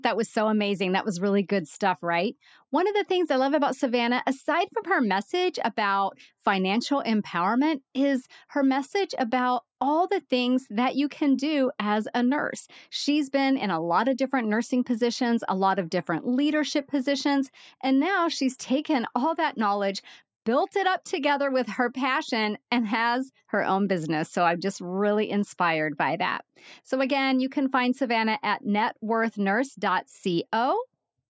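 Nothing in this speech recording stands out as a technical fault, so there's nothing here to flag.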